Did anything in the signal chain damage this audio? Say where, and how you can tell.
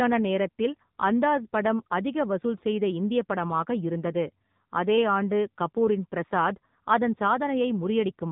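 Yes. The damage happens at the codec stage and runs through the whole speech clip. The sound is muffled and thin, with nothing above 4 kHz, and it has a buzzy, synthetic edge. Both are signs of the AMR narrowband mobile codec. That codec samples at 8 kHz and rebuilds speech from a vocal-tract model driven by a few pulses per 5 ms subframe. The plainly audible coarseness fits a low setting of about 7.4 kbps.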